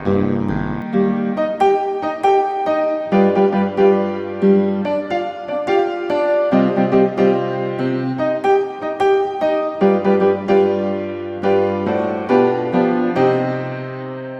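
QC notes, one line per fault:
0.0 to 0.82 s, overlap-add ripple: the audio was split into windowed frames and rebuilt with an overlap whose window gains fail to add up to a constant, so the level dips and recovers once every frame. The swing here is deep, about 60 dB, and repeats at around 100 times a second. That turns the opening into a harsh metallic buzz with extra tones around each note, riding on the sound until the effect stops.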